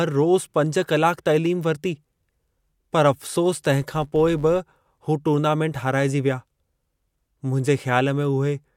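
From 3.82 to 4.62 s the speech carries a fine, steady buzz at about 93.8 Hz, a rapid train of ticks that grows and shrinks with the loudness of the voice and stops just before "हू टूर्नामेंट हाराइजी विया". It is a filter restarted on every block: the filter discards its memory at each block boundary and begins again from silence, so every block opens with a small transient. The tick rate fits a 512-sample buffer.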